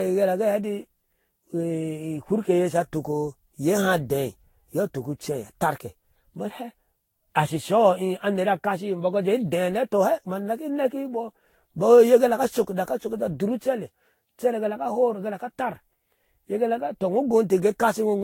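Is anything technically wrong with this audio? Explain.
Yes. Generation loss runs through the whole speech clip. The likely cause is repeated decoding and re-encoding, around ten passes, with a lossy codec whose character fits Vorbis at roughly 60 kbit/s. Each pass quantises again on a shifted frame grid, so noise and spectral gaps pile up rather than staying fixed. The result sounds swirly, smeared and hollow beyond what that bitrate alone would give, consonant attacks are blurred, and nothing remains above 16.7 kHz.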